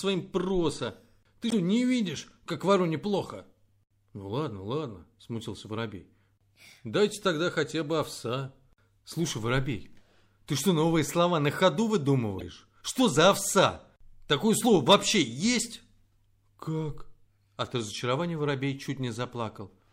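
At 1.48–1.53 s and 12.38–12.42 s, damaged data in the compressed speech stream makes the decoder misread frames, producing a brief chirp, squawk, click or short hole.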